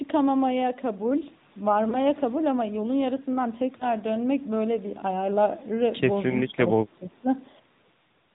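The whole clip passed through the AMR narrowband mobile codec, which discards everything above 4 kHz and resynthesises the speech, leaving it muffled and plainly buzzy, consistent with a mid-range mode near 10 kbps. At about 1.90 s and again at 3.78 s, lost AMR speech frames forced the decoder to repeat its previous settings at reduced gain, giving brief dips or warbles that each fit a single missing 20 ms frame. From 6.46 to 7.29 s the speech dips by up to about 15 dB in patches totalling around half a second, likely speech suppressed in double talk by an echo canceller turning down both sides.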